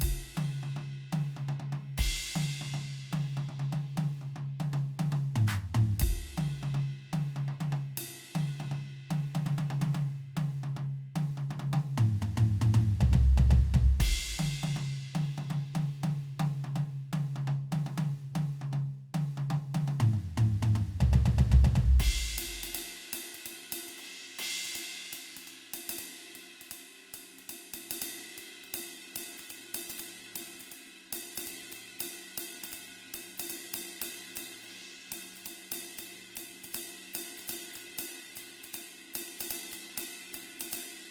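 Music, with an adaptive stream dropping to a lower bitrate at 28.66 s and staying there to the end. The switch is abrupt and gapless, and codec artefacts rise, which fits a step from roughly 64 kbit/s Opus down to about 16 kbit/s.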